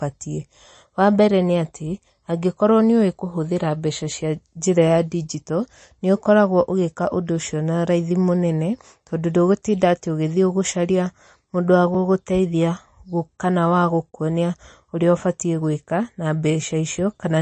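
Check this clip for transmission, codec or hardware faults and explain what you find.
Yes, two kinds of fault are audible: a codec problem across the whole clip and two dropouts.

MP3 compression, throughout the speech: the treble stops dead at about 8.3 kHz, and the codec damage is plainly audible, with a watery, swirly texture, metallic chirps on s sounds and smeared attacks. The likely cause is MP3 encoding at a low bitrate, which the sound suggests is somewhere around 35 kbps. Short of bits, the encoder zeroes weaker frequency lines, which flicker on and off from frame to frame, and it cuts everything above a fixed frequency.

Block of digital silence, at 11.94 s and from 14.11 to 14.13 s: in both places a block of zeros plays and the sound cuts out and back with no fade. The first gap lasts about 3.7 ms, too short to be heard as silence, so it comes across as a tick or dip. The second lasts about 21 ms, which fits a 1024-sample buffer, and is heard as a short hole. 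Such blocks come from output buffers that weren't filled in time or from calculations that produced invalid numbers.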